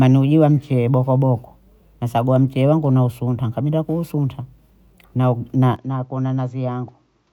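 Speech that, from 5.76 s to the end, abruptly loses everything above 7.6 kHz, drops roughly 10 dB and gains a faint new noise floor, with no gap. The likely cause is an input switched to a poorer device. Tone, level and noise all shift together, which a simple gain or filter change would not do.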